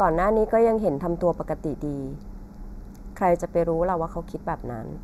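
One channel lags the other by a fraction of a millisecond throughout, and once summed to mono, channel delay (comb filtering) carves notches from around 3 kHz upward, leaving the speech hollow and dulled.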